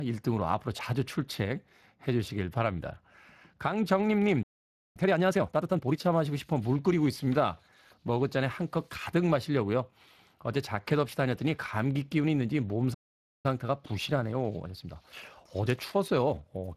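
The whole recording carries Speex codec damage that is plainly audible. The speech has the hoarse, grainy texture of a CELP coder short of bits for its excitation, unlike the watery swirl of transform codecs, which fits a rate around 22 kbps.

At 4.43 s the sound stops dead for about 0.52 s, a playback stall, likely from the player running out of data. It is silence mid-flow, not a click or a dropout. From 4.97 to 6.01 s a time-compressed catch-up follows. The speech runs hurried at 1.5 times normal speed, but its pitch stays unchanged. That unchanged pitch separates it from a simple speed-up.

At 12.94 s a second stall of about 0.50 s cuts the sound to silence. The catch-up after it, from 13.46 to 16.46 s, is gentler at 1.1 times speed. It is longer and subtler, a slight rush with no change in pitch.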